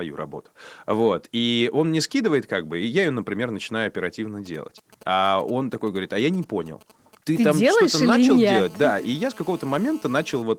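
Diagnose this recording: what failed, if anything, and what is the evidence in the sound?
Right after "ее например начинаю оперативно", from 4.46 to 7.62 s, you get GSM signalling bursts: a galloping dit-dit-dit of brief 217 Hz buzzes, roughly 25 dB under the speech. A nearby 2G phone was handshaking, and something in the analogue wiring or input stage rectified its RF.

From 7.63 to 10.42 s it turns into a steady GSM phone buzz, a hard, raspy 217 Hz tone full of harmonics, about 26 dB below the speech. The phone has gone into a call and bursts 217 times a second, and the same analogue stage demodulates each pulse into the audio.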